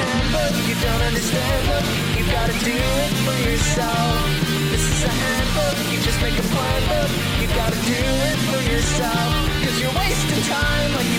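Nothing technically wrong can be heard anywhere in this audio, so there are no fault times or causes to report.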